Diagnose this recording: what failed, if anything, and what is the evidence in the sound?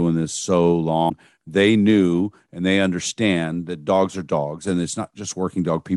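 The failure sits at the codec stage: damaged data in a compressed stream. From 1.06 to 1.12 s the speech breaks into a brief glitch. Corrupted bytes there left the decoder misreading frames, losing sync and hunting for the next valid frame header.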